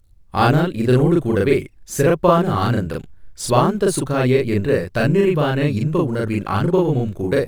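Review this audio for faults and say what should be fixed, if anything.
Channel delay (doubling) runs throughout the speech. One channel arrives 40 ms behind the other, and when both are summed to mono that late copy sits at equal level, heard as a thickened doubling or short slap echo. Fix by realigning the channels, and prevent it by checking inter-channel latency before any mono fold-down.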